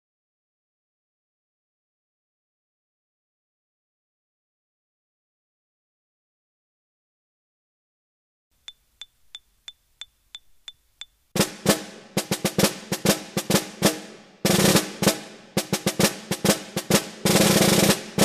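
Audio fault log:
Nothing stood out as a problem on listening.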